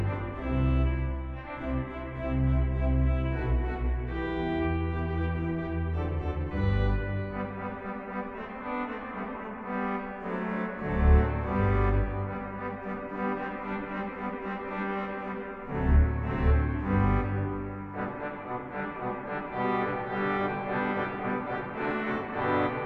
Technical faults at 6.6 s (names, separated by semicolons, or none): none